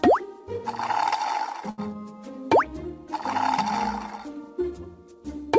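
Short stall from a late packet, 1.70 to 1.80 s: the jitter buffer ran empty, so the last sound stretches 80 ms, then resumes with nothing lost.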